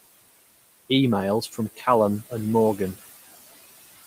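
Noise suppressor artifacts run through the whole recording. The suppressor treats the steady room noise, sitting about 17 dB below the speech, as something to remove and pulls those bands down by about 16 dB frame by frame. The background sinks away between phrases and comes back up underneath the speech.

Speech cut by the noise suppressor occurs from 1.77 to 1.87 s, about 100 ms. Here the suppressor mistakes a stretch of speech for noise and turns it down by as much as about 11 dB, so that moment sounds swallowed and faint.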